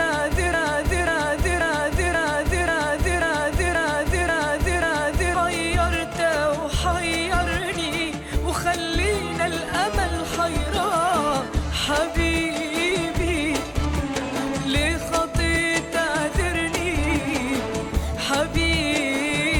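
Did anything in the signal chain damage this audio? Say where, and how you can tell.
Yes. A stalled playback or stream buffer is the likely cause: it kept resending its last fragment, giving a broken-record loop. From the opening to 5.35 s, an identical 0.54 s piece repeats back to back nine times, already running when the clip starts, and the audio meant for that span is gone.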